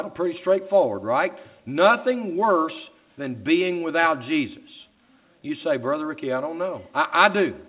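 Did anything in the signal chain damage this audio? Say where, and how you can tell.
No, nothing in the chain damaged this audio: it came through a call path whose ceiling at 4 kHz is simply the telephone band, consistent with a 64 kbps G.711 A-law codec, and that is the expected character of such a link rather than damage.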